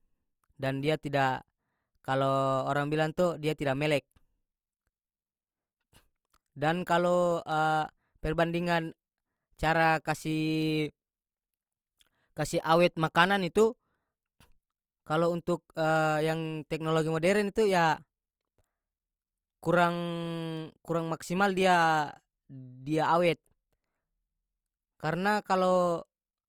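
Sharp ticks of uneven strength recur roughly every 0.7 s from 0.66 s to 26.18 s: word clock ticks, where an unlocked receiver's clock drifts about 30 ppm, dropping or repeating one sample.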